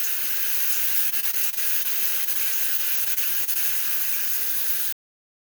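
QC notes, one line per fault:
Throughout: block size mismatch (padded). Each block arrives slightly short and is topped up with zeros, so a brief silent gap recurs at 91.9 Hz and is heard as a steady buzz. The padding also stretches playback to 0.919 of normal speed while pitch stays about normal.
1.09–1.86 s and 2.77–3.57 s: repeated packet loss (robotic sound). Packets kept going missing, and each hole was patched by extending the preceding sound. The first run has eight gaps with 100 ms lost and about 22% of the span concealed. The second has five gaps with 80 ms lost and about 13% concealed. No gap exceeds 30 ms, giving a choppy texture with pieces missing.
2.24–2.29 s: short stall from a late packet. A packet came 25 ms late, and the jitter buffer ran dry. The receiver held the last sound for 25 ms until it arrived, then resumed from the same point, so nothing is lost but the sound briefly hangs too long.
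2.33–2.37 s: short concealed packet loss. About 20 ms never reached the decoder in time. The receiver bridged the hole by continuing the preceding sound and blending back into the real signal, leaving a brief smear or wobble.
4.93 s: cut-off end. The final buffers were never played out, so the audio stops mid-sound and drops straight to digital silence with no natural decay.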